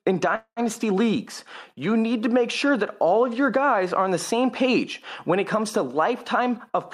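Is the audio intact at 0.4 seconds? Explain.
No. From 0.35 to 0.60 s there is a call audio freeze, likely from delayed packets emptying the jitter buffer. The last sound is prolonged as a fading buzz or hiss, then goes quiet, before "leagues you need to" resumes. Unlike a dropout, nothing is lost; everything after arrives about 0.21 s late.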